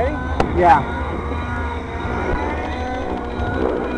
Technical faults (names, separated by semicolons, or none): train of clicks